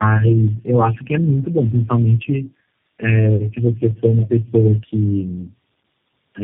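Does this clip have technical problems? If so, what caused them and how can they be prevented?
Yes. Tandem speech coding runs through the whole clip: nothing above 3.3 kHz, with a rough, muffled, warbly texture that suggests about four low-rate speech coders in series, each re-encoding the previous one's decoded output and compounding its errors. Prevention: use one codec end to end or transcoder-free operation so the speech is coded only once.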